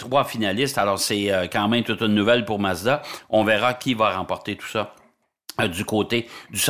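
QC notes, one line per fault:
Nothing stood out on listening to the speech in this clip.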